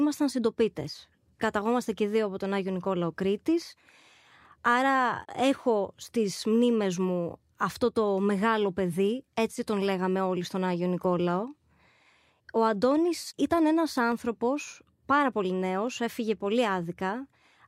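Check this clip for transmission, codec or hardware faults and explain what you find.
Two brief clicks turn up in the speech, one at 14.12 s and another at 15.88 s. Each sounds like dropped samples: a single sharp tick that shows as a thin vertical line in the spectrum. The likely cause is a tiny fraction of a millisecond going missing, so the waveform jumps straight to a later value. The gap is far too short to remove any audible sound, so you just hear the snap.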